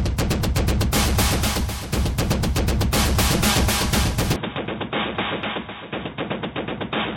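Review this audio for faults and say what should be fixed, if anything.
At 4.36 s the sound abruptly turns dull and boxy through to the end at 7.17 s, with nothing above 3.8 kHz, a level roughly 5 dB lower and a faint new noise floor. The likely cause is the input switched to a poorer device. The simultaneous shifts in level and noise, with no gap at the switch, distinguish it from a plain low-pass filter. Lock the recording input to one device so the system cannot reroute mid-capture.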